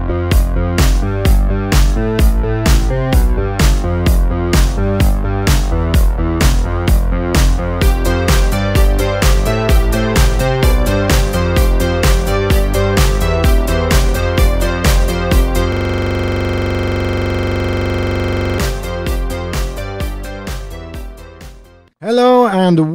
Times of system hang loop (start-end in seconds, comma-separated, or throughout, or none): 15.72-18.59